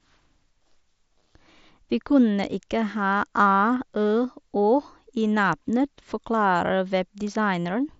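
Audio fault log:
7.64 to 7.66 s, concealed Bluetooth headset packet loss: a short run of voice packets between the headset and the phone was lost, with about 52.5 ms of audio lost. The receiver filled the gap by repeating the closest-matching piece of the preceding waveform, so the sound briefly turns into a buzzy, steady tone at full level, then warbles slightly as real audio resumes. The gap sits within the light grain of the mSBC wideband link, which caps the band at 8 kHz.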